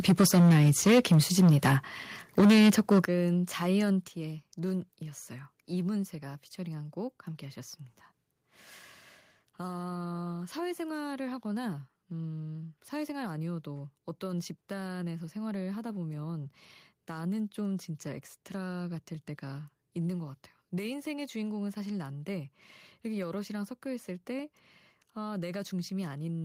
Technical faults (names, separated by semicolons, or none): microphone overload; microphone volume stepped down